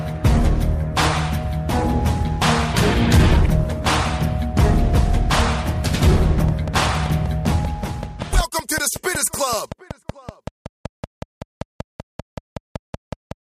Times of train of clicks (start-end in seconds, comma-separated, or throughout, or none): 6.48-13.32